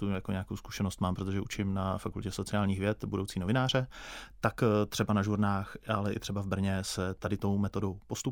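Speech, with no technical faults audible anywhere.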